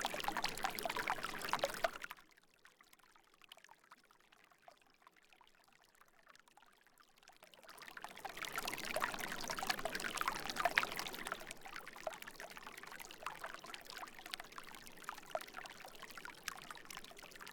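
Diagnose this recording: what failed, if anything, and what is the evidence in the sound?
Zipper noise at the driver or buffer stage, 1.79 to 2.30 s: a drop of about 25 dB arrives in unsmoothed 4 dB steps, roughly ten per second. Each step leaves a small click, heard as ticking riding on the fading sound.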